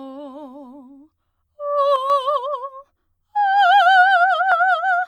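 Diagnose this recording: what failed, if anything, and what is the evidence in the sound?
One channel drops out in this music from 1.96 to 2.10 s. The level falls abruptly by about 6 dB, then recovers. Shared material halves in the mono sum. Anything only in the lost channel vanishes. The likely cause is an intermittent analogue wiring contact.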